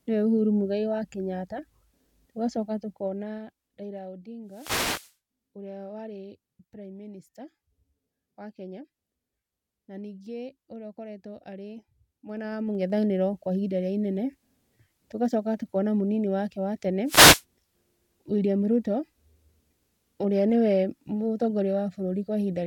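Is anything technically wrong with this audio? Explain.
Yes. The speech has two kinds of fault, each heard twice.

Zipper noise runs from 2.55 to 4.01 s, as the level drops by roughly 15 dB, and again from 12.26 to 12.99 s, as it rises by about the same amount. The gain moves in 2 dB jumps instead of gliding, about seven steps a second on the way down and about fifteen on the way up. Each jump leaves a tiny click, so a regular ticking rides on the speech.

A wireless microphone noise hit occurs from 4.46 to 5.17 s and again from 17.06 to 17.43 s. The analogue FM link fades as reflected signals cancel, so receiver noise surges up for a moment. It sounds like a brief swish of static. Unlike the zipper ticks, it is an irregular, broadband hiss that has no link to any level change.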